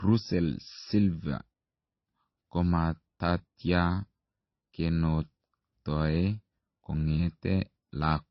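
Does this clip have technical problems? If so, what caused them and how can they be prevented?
Yes. Throughout the speech nothing sounds above about 5.8 kHz, and two layers of different codec artefacts are heard together. This is likely transcoding between lossy codecs, pointing to low-rate MP3 re-encoded to Opus. A single low-bitrate codec would show only one artefact signature. Encode once from the original uncompressed source rather than from an already compressed file.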